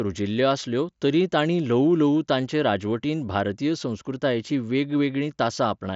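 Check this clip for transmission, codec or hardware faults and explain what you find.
No transmission, codec or hardware faults can be heard in the speech. It has the sound of a wideband Bluetooth headset link using the mSBC codec, with nothing above about 7.7 kHz and only light codec grain.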